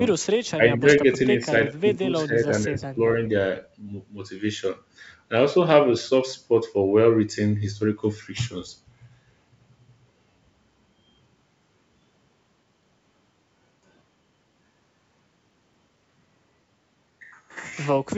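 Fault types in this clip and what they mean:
Echo leak: a very faint copy of the speech returns about 0.43 s late, around 0.44 to 0.51 s, likely because a far-end echo canceller let loudspeaker pickup through. On a spectrogram it shows as weak, delayed harmonics trailing the main trace.
Speech suppressed in double talk: the level dips by up to around 10 dB in short chunks at 0.57–1.02, 1.36–1.51, 1.72–2.48 and 2.75–2.98 s, likely from echo control ducking overlapping talk. The waveform envelope shows notches; the spectrogram shows faded, gappy bands.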